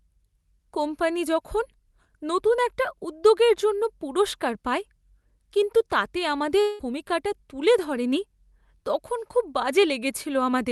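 From 6.61 to 6.82 s, just after "কিন্তু তাতে আমাদের", the last sound stretches into a fading buzz for about 175 ms, then speech resumes with about 180 ms missing, likely a long network dropout. Unlike a brief packet loss, the filler audibly decays and speech skips ahead.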